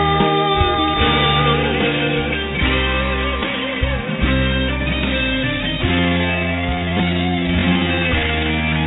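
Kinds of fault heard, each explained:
Time-stretched section: From 5.87 s to the end, the pace abruptly slows to about 0.7 of normal speed while the pitch holds steady, so the speech drags. That's likely software stretching this part to fill a set length, repeating tiny pieces to keep the pitch. It sits inside the call path's narrow band, with nothing above 4 kHz, which fits G.711 mu-law.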